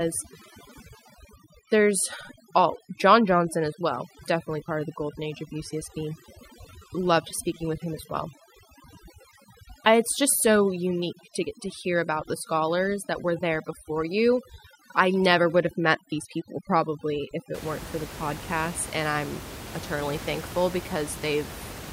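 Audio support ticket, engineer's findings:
Speech with near-silent gaps carrying twinkling specks, 0.0 to 17.5 s. Overdone noise removal: denoiser strength set too high, cutting individual frequency bands toward zero wherever they sit near its noise estimate, taking the quieter voice components with them. Room noise, about 14 dB below the speech, is what the denoiser was reacting to. Clears after 17.5 s. Check noise reduction setting on the capture chain.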